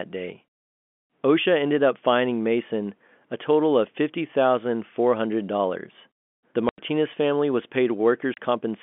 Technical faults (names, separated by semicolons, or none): packet loss filled with silence